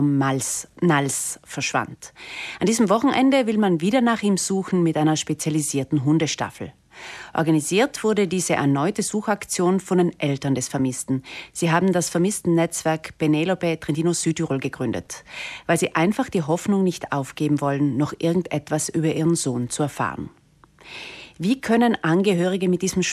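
No technical faults are audible.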